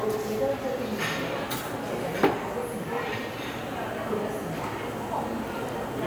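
Nothing here stands out as a technical fault; the sound just runs along without any trouble worth pointing to.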